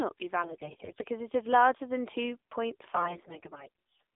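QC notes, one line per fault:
Throughout: AMR narrowband mobile codec. The speech sounds boxy and plainly buzzy, with a synthetic edge on voiced sounds. Nothing passes below about 250 Hz or above about 3.6 kHz. The upper limit sits under the 4 kHz ceiling of 8 kHz telephone sampling. The buzz comes from the codec rebuilding each 20 ms frame from a vocal-tract model driven by a few pulses. The sparse pulse detail fits a low mode of around 7.4 kbps.
0.42–1.04 s and 2.90–3.68 s: AMR bit errors. In both stretches the voice turns hoarse, scratchy and gargly, yet it keeps roughly its pitch and level. The first ends just before "it is larger than", and the second starts right after "larger than two point". The weakly protected bits of each frame arrived corrupted, on the order of a tenth or more of them. The frames still decoded, but the excitation pulses landed in the wrong places and the fine gain and spectral values were off.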